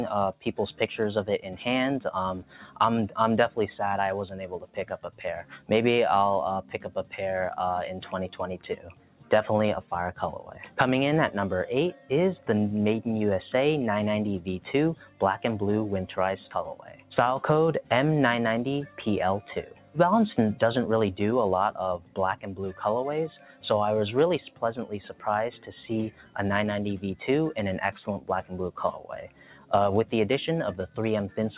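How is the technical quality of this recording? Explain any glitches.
The recording is held back by a speech noise suppressor acting on non-speech material, which pulls steady and decaying parts of the sound down. Above 4 kHz nothing remains, consistent with a G.711 A-law call codec, which accounts for the narrow, dull top end.

Noise suppressor applied to music or sounds: throughout the clip, a suppressor designed for speech treats sustained, tonal and ambient content as noise. It lets onsets pass and turns down what follows, so the level swings by around 10 dB between attacks and held portions. The result is a pumping, uneven loudness, with sustains and tails sounding thinned and clipped rather than ringing out naturally.

Sound cut by the noise suppressor: the sharpest drops, about 11 to 12 dB, fall at 0.33 to 0.8 s, 2.41 to 2.8 s, 4.55 to 12.1 s, 14.95 to 15.21 s, 16.75 to 19.97 s, 21.98 to 26.36 s and 28.19 to 30.98 s. 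The affected stretches inside each window are short in the brief ones and add up to a couple of seconds across the longest one. In each, the suppressor's gain clamps down once the sound settles into a steady or fading state, so decays collapse early and sustained parts sink, while the initial transients stay largely intact.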